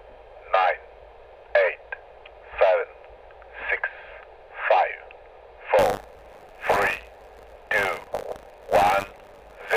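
From 5.78 s to the end, buffer tearing sets in: writer and reader have slipped, so each period carries a small slice of audio about 40 ms old. It is a steady 100 Hz rattle that, unlike random crackle, stays regular and follows the signal.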